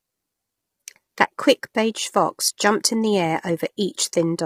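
Throughout, the speech sounds rough and grainy, with noise between harmonics and a thin top band, likely low-delay AAC compression at heavy settings, fitting roughly 24 kbps.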